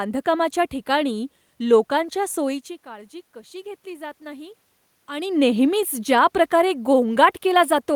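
From 2.84 to 5.23 s, automatic gain rising: the gain control, responding to an input drop of about 16 dB as the talker moves away, gradually adds about 5 dB. The speech and the room noise swell upward together across that stretch.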